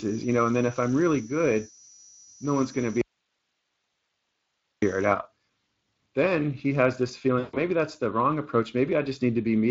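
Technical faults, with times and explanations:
Throughout: Speex codec. The speech sounds noisy and hoarse, with a noise-like upper band. The sound fits a bitrate around 20 kbps.
0.0 to 5.18 s: feedback whistle. A thin, steady 5.9 kHz tone sits about 15 dB below the speech, wavering slightly. It is likely a loudspeaker-to-microphone loop held just short of runaway.
3.01 to 4.82 s: audio dropout to a faint residue. The speech cuts out abruptly for 1.81 s, leaving only hiss about 45 dB down. The signal was likely lost while the path stayed live.
7.39 to 7.57 s: VoIP packet loss concealed by the speech codec. After "then he has this", 140 ms is stretched into a buzzy tone or coloured noise that fades before "that's the wrong". The decoder stretches its last pitch, which fits about seven lost frames.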